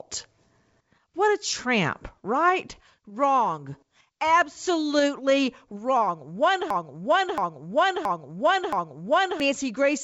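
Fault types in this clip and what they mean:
Broken-record loop: from 6.70 to 9.40 s, an identical 0.67 s fragment repeats four times back to back, likely from a stalled stream resending its last buffer. Unlike a dropout, there is no gap. Unlike a stutter, the repeats are long and exact.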